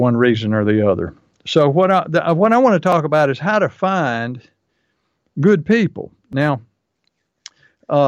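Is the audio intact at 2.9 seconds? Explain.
No, there's a repeated buffer at 2.92 s, right after "what I want to" and before "about is how to". Fresh audio arrived late, so the device replayed its last 5 ms chunk once more. That piece this short comes across as a quick click rather than a stutter.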